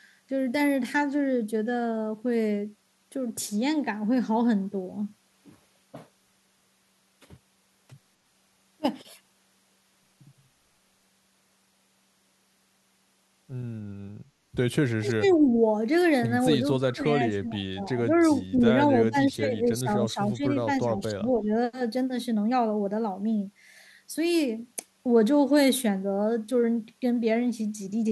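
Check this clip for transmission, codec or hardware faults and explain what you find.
Two faults are present, both between about 14.5 and 21.5 s: speech suppressed in double talk, and echo leak.

Speech suppressed in double talk occurs at 14.52–14.57, 14.98–15.51, 16.79–18.1, 18.35–18.55, 19.06–20.42 and 20.82–21.5 s. The voice dips or breaks up in pieces. The deepest drops reach about 30 dB near 15 s and about 25 dB around 17 s. Others are milder, down to only about 5 dB. The likely cause is both sides talking at once. The echo canceller cannot separate the near talker from the loudspeaker echo, so it turns everything down.

Echo leak appears at 15.28–15.34 and 18.58–18.62 s. A faint copy of the voice arrives 252 ms late. The first copy sits about 25 dB below the speech. The second is louder, about 15 dB down. The likely cause is a loudspeaker on one side whose echo canceller fails to remove all that its microphone picks up. 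The leftover is sent back as these brief scraps.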